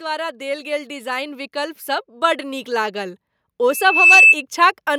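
Speech, with automatic gain rising from 0.05 to 3.24 s as the control lifts a quiet input by about 8 dB. Voice and background swell together, so the waveform envelope widens steadily. From 3.69 to 4.37 s a loudspeaker feedback squeal takes over: the mic-speaker loop runs away at 2.6 kHz, building over under half a second to roughly 10 dB above the speech. On a spectrogram it shows as a bright horizontal line.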